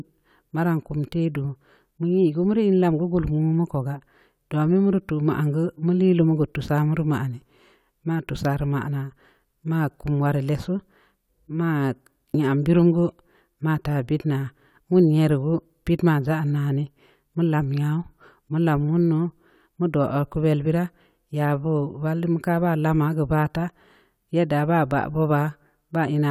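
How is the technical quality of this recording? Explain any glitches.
No technical faults can be heard anywhere here.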